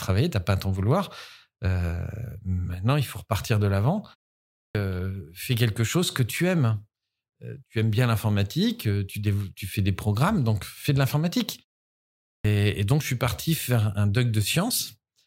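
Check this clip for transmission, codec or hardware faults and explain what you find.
Two instances of clipped start after a pause appear. At 4.52 s, after "faut repartir de l'avant" and a 0.45 s pause, about 228 ms vanishes before "fais quelque chose que". At 12.24 s, after a 0.68 s pause, about 205 ms disappears before "et donc je suis". The output device sleeps during silence and takes time to wake, so speech restarts abruptly without its onset.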